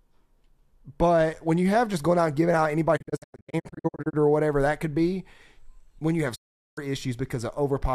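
Speech with two digital broadcast dropouts, where the receiver stopped getting clean frames and muted its output until valid data returned. The first runs from 2.96 to 4.15 s, after "out and giving out": about 620 ms of sound is lost in short holes scattered across 1.15 s, none longer than 96 ms, each with a 20 ms fade, before "or whatever that could". The second, from 6.34 to 6.79 s after "when you have", removes about 410 ms.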